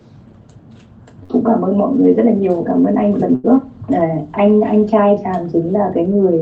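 Two bursts of packet loss, at 1.23 to 1.31 s and 3.35 to 3.46 s: the receiver stretches the last sound into a fading buzz or hiss, then skips ahead.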